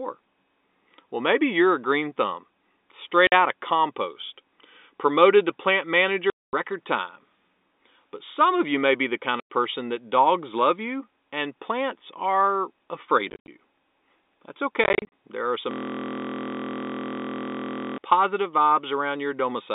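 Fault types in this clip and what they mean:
Packet loss filled with silence: Packets failed to arrive, and the receiver played silence in their place. The speech drops into hard-edged holes from 50 to 230 ms, which fits 10 ms packets. Two gaps, around 13.3 s and 14.8 s, come as scattered short bursts.
System hang loop: The system froze while the audio hardware kept replaying the same 23.22 ms buffer, which fits a 1024-sample buffer. From about 15.71 to 17.98 s, the sound becomes a steady mechanical buzz at 43.1 Hz.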